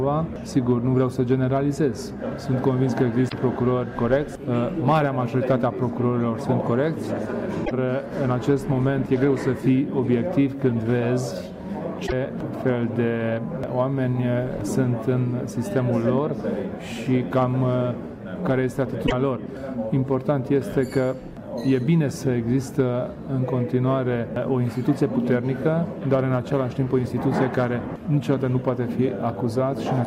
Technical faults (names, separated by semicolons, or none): damaged data in a compressed stream